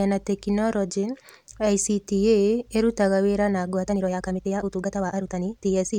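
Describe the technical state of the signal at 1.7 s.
At 1.7 s the signal is intact, with no dropout, clipping, distortion or other technical fault audible at that point.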